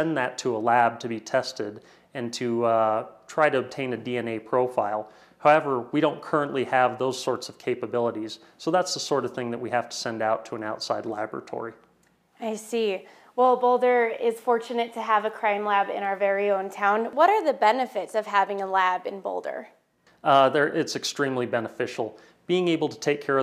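No technical faults are audible.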